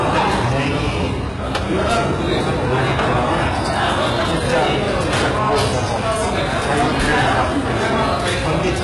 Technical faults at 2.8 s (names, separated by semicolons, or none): hard clipping; HE-AAC compression